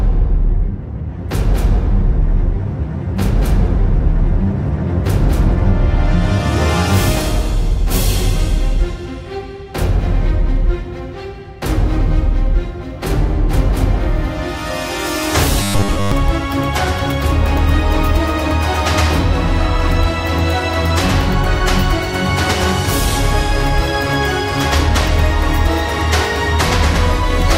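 From 15.63 to 16.12 s the sound turns into a stiff, metallic buzz pinned at 100 Hz: robotic sound from repeated short buffers. Most of that half-second is likely one 10 ms chunk replayed over and over while fresh audio is skipped.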